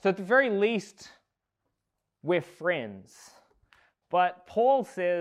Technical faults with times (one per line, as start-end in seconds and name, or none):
none